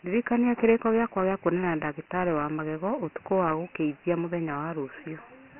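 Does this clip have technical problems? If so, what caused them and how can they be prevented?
Yes. Dialogic VOX ADPCM runs through the whole speech clip: coarse 4-bit adaptive coding leaves a gritty hiss trailing the speech, and nothing survives above 3 kHz, which points to 6,000 samples a second at about 24 kbps. Storing or recording at a higher sample rate in linear PCM, or with a wideband codec, prevents this.

Mains hum appears from 0.46 to 1.96 s as a steady 60 Hz tone roughly 35 dB below the speech, most likely a ground loop or nearby transformer coupling in. Proper grounding, balanced cabling and distance from power supplies prevent it.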